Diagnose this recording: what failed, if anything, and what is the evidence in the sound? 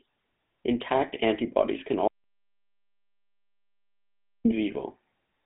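The speech carries the buzzy, gravelly roughness of the GSM full-rate codec throughout, which fits its 13 kbps coding: a vocal-tract filter driven by sparse, regularly spaced pulses. On a spectrogram, energy is confined to 150 Hz to 3.4 kHz, with nothing above 3.7 kHz.

At the capture or link stage, an audio dropout to silence runs from 2.08 to 4.45 s, cutting in right after "antibodies can" and losing about 2.37 s. The waveform drops to flat silence with no room tone, likely from a lost input while encoding continued.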